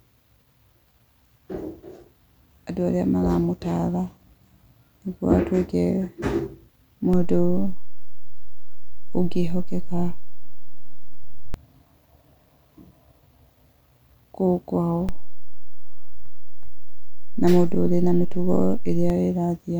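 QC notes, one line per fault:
7.13–11.54 s and 15.09–19.10 s, DC step: the waveform's zero line jumps by about −17 dBFS, then about −16 dBFS, holds, and returns at each range's end, giving low thumps as the speech continues unchanged. The waveform shows an offset baseline, and the spectrogram shows brief broadband low-frequency smears at each edge.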